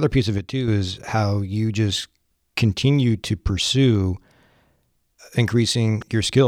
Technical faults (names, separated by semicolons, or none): sudden gain jump